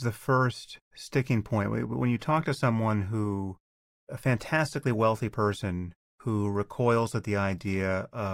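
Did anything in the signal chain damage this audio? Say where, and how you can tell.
No, nothing in the chain audibly damaged this speech.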